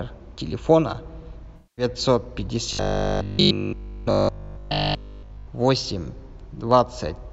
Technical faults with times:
1.56-1.85 AAC frame loss with concealment
2.73-5.49 robotic sound from repeated short buffers

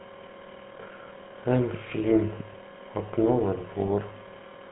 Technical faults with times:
0.00-4.71 GSM full-rate codec

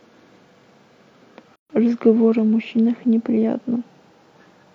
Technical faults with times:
1.56-1.70 gap at a join of encoded pieces

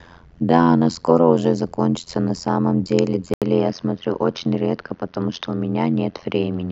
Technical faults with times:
0.00-6.71 overlap-add ripple
3.34-6.71 input switched to a poorer device

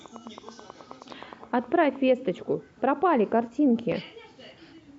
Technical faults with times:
0.06-1.97 train of clicks

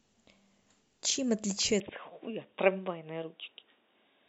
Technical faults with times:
1.80-4.29 input switched to a poorer device

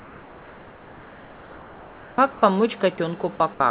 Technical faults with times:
0.00-2.42 comfort noise in place of the background
2.96-2.98 sound dropped by the voice detector

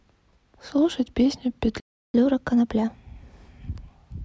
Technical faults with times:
1.80-2.14 playback stall
2.14-4.23 catch-up at higher speed

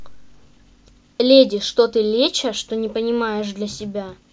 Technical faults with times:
none

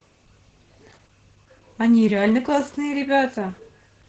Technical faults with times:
0.00-4.08 Opus voice compression

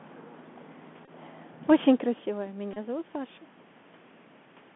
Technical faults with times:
0.00-4.75 Bluetooth CVSD headset codec
1.05-1.09 Bluetooth headset packet repeated
1.67-3.50 automatic gain rising
2.73-2.78 Bluetooth headset packet repeated

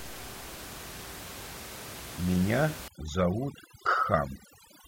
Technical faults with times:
2.88-4.88 overdone noise removal

